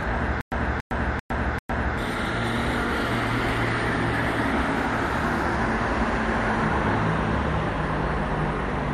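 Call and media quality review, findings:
Stutter with silent gaps, 0.41–1.98 s: a 283 ms fragment replays 4 times, each followed by 109 ms digital silence, 392 ms period. Likely a playback or stream stall, with each retry re-emitting the last buffered fragment, then running dry. Underlying audio lost.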